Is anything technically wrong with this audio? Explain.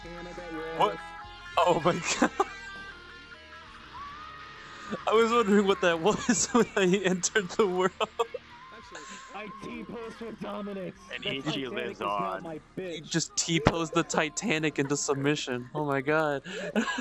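Yes. Throughout the clip, the resampler restarted on every block. Each 20 ms block was converted from 48 kHz to 24 kHz in isolation, leaving a small error at every edge. This is heard as a 50 Hz buzz riding on the sound, present only with signal. A spectrogram shows faint vertical lines every 20 ms, and the waveform shows small steps at the block boundaries.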